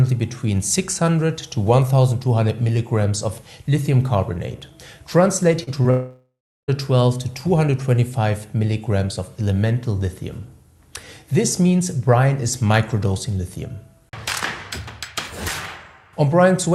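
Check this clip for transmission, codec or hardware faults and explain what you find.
Two transmission faults appear, clustered just before and around six seconds.

Short concealed packet loss at 5.63 to 5.69 s and 5.83 to 5.86 s: about 40 ms, then 20 ms, of audio failed to reach the decoder. The receiver extended the preceding sound to fill each gap, leaving brief smears before blending back.

Long network dropout from 5.90 to 6.70 s: roughly 0.78 s of audio is lost, likely because nothing arrived over the network. The receiver continues the last sound as a fading buzz, followed by about 0.35 s of silence, and the audio resumes without the missing part.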